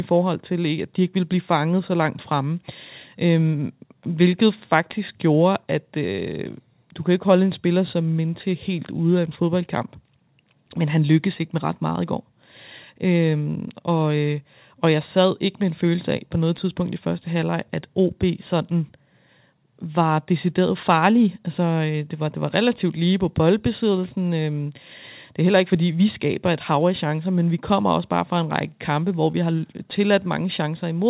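No technical faults are audible.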